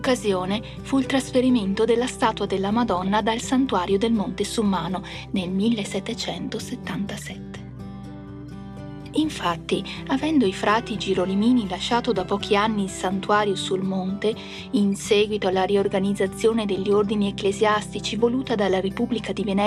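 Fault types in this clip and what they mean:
DAB burbling: weak reception lets bit errors slip past error correction into the MP2 data, so corrupted samples add short noise blips to individual sub-bands and corrupted scale factors make sub-bands leap in level. You hear short patches of burbling from 2.88 to 3.08 s and again from 12.20 to 12.37 s.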